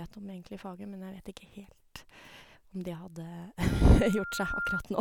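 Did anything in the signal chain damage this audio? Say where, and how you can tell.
Yes. From 3.70 s to 4.82 s a single steady tone near 1.4 kHz appears under the speech and swells over roughly a second into a squeal that ends up about as loud as the talker. That is loudspeaker feedback squeal, arising on the analogue side where a microphone hears the loudspeaker it feeds. Around 1.4 kHz the loop's gain passed unity, so that frequency kept recirculating and growing on its own until it reached the speech's level.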